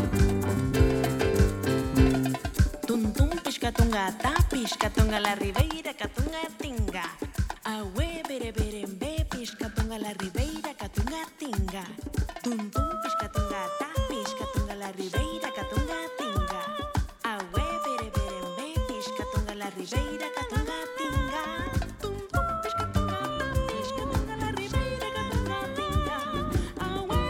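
One channel drops out at 5.61 s and stays gone to the end of the clip. The sound abruptly becomes quieter by about 6 dB and remains at that lower level, with no recovery. The likely cause is one side of a stereo signal being lost before the two sides are summed to mono: whatever both channels shared arrives at only half its former strength, and anything carried only by the missing side vanishes entirely.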